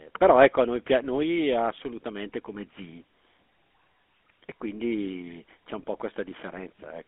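Throughout, the speech carries the GSM full-rate codec. The band runs from 200 Hz to 3.5 kHz. The coder rebuilds the voice from a vocal-tract model fed with sparse pulses. That leaves a plainly buzzy, gravelly roughness, which fits a 13 kbps coder.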